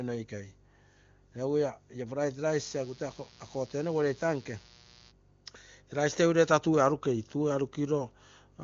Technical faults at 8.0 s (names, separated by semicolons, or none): none